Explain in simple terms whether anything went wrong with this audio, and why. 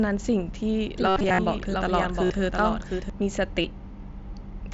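Doubled audio track, from 0.98 to 3.10 s: during this stretch the speech is heard twice, with a second, somewhat quieter copy trailing about 0.7 s behind the first. The copy sounds just as clear and full as the original, with no echo tail or room sound, and it switches on and off abruptly. The likely cause is the same sound being picked up a second time through a slower route, or an edit that left two misaligned copies layered together.

Concealed Bluetooth headset packet loss, at 1.08 to 1.39 s, 2.26 to 2.30 s and 3.62 to 3.64 s: small chunks of sound travelling from the headset to the phone never arrived, and the phone filled each gap by repeating a snippet of what it had just received. The first patch has many losses spread over about 0.3 s, the longest lasting 75 ms, so a brief buzzy, held tone shows through there. The later two are short, with the wideband headset link carrying the sound in between.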